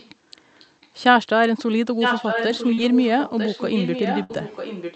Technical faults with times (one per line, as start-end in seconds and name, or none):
0.00-0.11 echo leak
0.59-0.88 echo leak
1.99-4.95 echo leak
2.73-2.79 short concealed packet loss
4.23-4.31 burst of packet loss